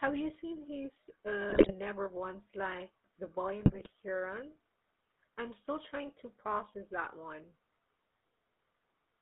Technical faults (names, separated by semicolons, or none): GSM full-rate codec; GSM bit errors